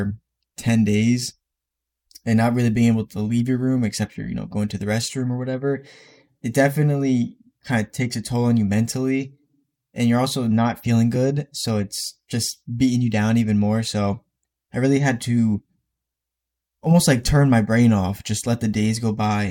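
Nothing in this speech recording stood out as a technical problem on listening.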